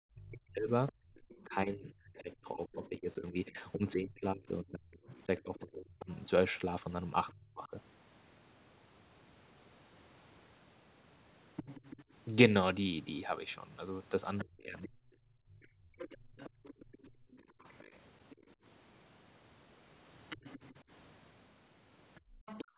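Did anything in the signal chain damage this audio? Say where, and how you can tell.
Yes. The damage happens at the call-processing stage, in the echo canceller.

Speech suppressed in double talk appears from 0.14 to 7.73 s, with around four seconds affected in total, and again from 14.42 to 14.98 s and from 22.62 to 22.72 s. In those spans the talker's voice dips by up to about 30 to 35 dB. It was likely caused by both ends talking at once, so the canceller turned down everything. On the waveform the speech envelope shows sudden troughs. On the spectrogram the harmonic stacks fade or break into pieces.

The other side's voice leaking through runs from 0.88 to 7.34 s at roughly 25 dB below the talker, and from 11.56 s to the end at roughly 15 dB below. A second voice sits under the main one. This is likely far-end audio from the loudspeaker that the canceller left in the microphone signal. 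On the spectrogram it shows as a faint, separate set of harmonics that doesn't follow the talker's pitch.

Background gated by the echo canceller shows from 0.97 to 1.17 s (about 24 dB down), from 15.26 to 17.63 s (about 21 dB, about 1.5 s of it affected) and from 22.21 to 22.34 s (about 26 dB). The room tone drops away and then returns when the canceller releases. On the spectrogram the noise floor empties into dark vertical bands. Everything sits below 4 kHz, which fits a G.711 narrowband call.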